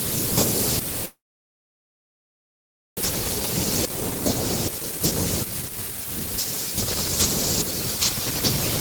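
From 1.05 s to 3.03 s the sound breaks off. The last sound is stretched into a brief fading buzz, then about 1.8 s of near silence follows, and the speech resumes with 1.36 s of audio missing. This is likely a long network dropout, which also shifted the playout delay by around half a second.

From 4.69 s to 6.71 s there is a jitter buffer speed-up. Holding more audio than it needed, the receiver repeatedly cut out short pieces of one or a few pitch periods. The speech runs at 120% speed with unchanged pitch and sounds hurried, losing around 0.4 s in total.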